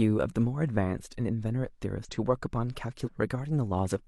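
At 2.05 to 2.10 s and again at 3.02 to 3.09 s, the speech breaks into a brief chirp, squawk, click or short hole. This is damaged data in a compressed stream. Corrupted bytes make the decoder misread frames and lose sync until it finds the next valid frame header.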